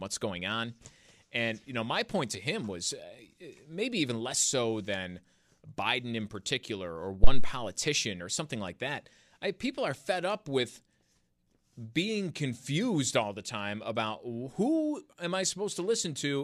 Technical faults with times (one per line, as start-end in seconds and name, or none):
7.24-7.56 phantom power thump